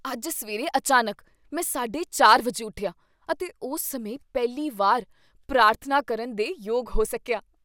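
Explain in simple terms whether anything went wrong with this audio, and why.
Nothing went wrong with this audio; I can't hear any problem anywhere in the recording.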